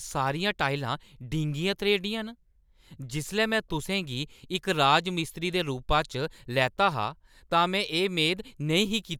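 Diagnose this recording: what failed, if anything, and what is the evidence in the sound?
Nothing in this speech recording points to a failure at any stage of the chain, from analogue wiring through converter, buffering, processing, transmission or playback.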